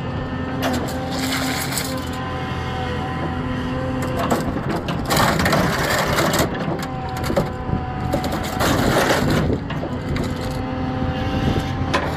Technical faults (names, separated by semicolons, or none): repeated buffer